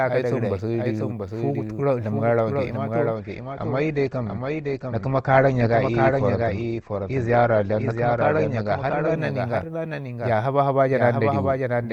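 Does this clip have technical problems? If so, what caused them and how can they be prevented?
Yes. A doubled audio track runs throughout: a full-band copy of the speech trails roughly 0.7 s behind, about 5 dB quieter, with no decay or room colour, unlike a genuine echo. It likely comes from the same source being captured twice, once by a slower path. Routing each source through a single capture path prevents it.

From 3.16 to 9.16 s an adaptive stream at a lower bitrate takes over. The treble vanishes above 8.2 kHz and codec artefacts thicken, which fits a drop from around 64 to 16 kbit/s Opus. The switch is sudden but leaves no gap, unlike a dropout. A steadier connection or a fixed minimum bitrate prevents it.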